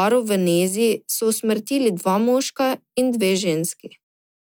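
No dropouts, clicks, distortion or timing faults turn up anywhere in this speech recording.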